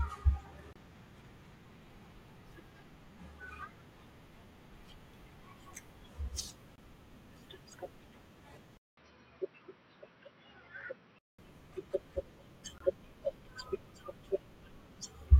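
At 0.73, 6.76 and 12.78 s, six seconds apart, the speech breaks for about 24 to 27 ms: a gap at a join of encoded pieces, where separately encoded segments kept their start delay and end padding. Each shows as a thin, slightly smeared silent column across the spectrogram and a flat dip in the waveform.

From 8.77 to 11.39 s, after a 200 ms silence, the speech turns dull and about 10 dB quieter, with a new noise floor far beneath it. The spectrogram shows nothing above 5.8 kHz, likely from the input switching to a poorer device.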